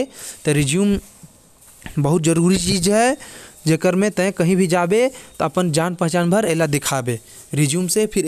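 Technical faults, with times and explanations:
No technical faults can be heard in this speech recording. There is nothing to list at any point in the audio.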